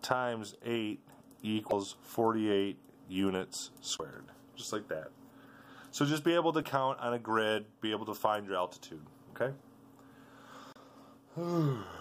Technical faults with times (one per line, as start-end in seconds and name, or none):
1.69-1.73 damaged data in a compressed stream
3.96-4.00 damaged data in a compressed stream
6.60-6.65 damaged data in a compressed stream
10.72-10.77 damaged data in a compressed stream